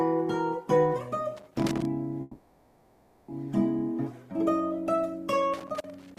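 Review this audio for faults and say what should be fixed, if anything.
Irregular scratchy crackle from 1.37 to 1.85 s and from 5.54 s to the end is loose connector crackle: a worn or dirty contact intermittently breaking the signal path.

From 2.21 to 3.30 s a fading buzz holds the last sound for about 1.07 s before the audio resumes. This is a call audio freeze, likely from delayed packets emptying the jitter buffer. Nothing is lost, but everything after it arrives about 1.07 s later.

To prevent these, clean or replace the faulty connector and secure the cable, and give the call a steadier network path or a deeper jitter buffer.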